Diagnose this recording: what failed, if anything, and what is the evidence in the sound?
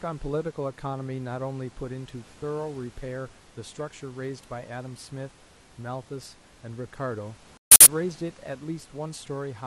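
Speech cuts abruptly to silence from 7.57 to 7.87 s, then resumes on time: corrupt frames muted at the codec, the decoder rejecting a run that fits five damaged frames.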